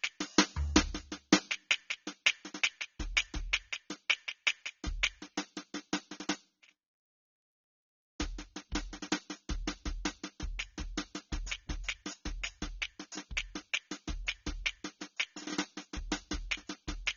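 Heavy AAC compression, likely AAC-LC at a very low rate, around 24 kbps, runs through the whole music clip. With so few bits per frame, the encoder discards high frequencies and coarsely quantises the rest, so nothing survives above 7 kHz. The music sounds dull and muffled from start to finish, with plainly audible damage: sustained tones warble and smear, and the top end has a thin, fizzy texture in place of real detail.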